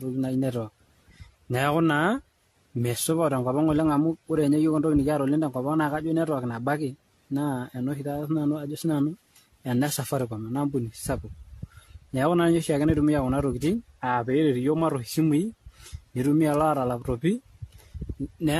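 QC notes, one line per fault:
Throughout, generation loss: the speech sounds swirly, hollow and smeared, with blurred consonant attacks and nothing above 14 kHz. This likely comes from repeated lossy encoding, about ten passes of AAC-LC at what sounds like 64 kbit/s, each requantising on a shifted frame grid.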